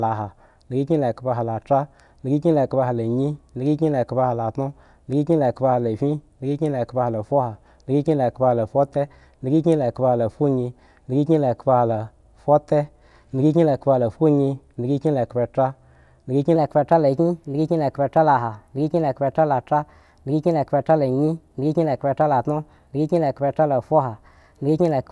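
From 16.56 s, right after "endhga kyin", there's a wrong sample rate: playback runs about 1.09 times fast, nudging the voice up about 1.5 semitones, which fits 22 kHz audio played at 24 kHz.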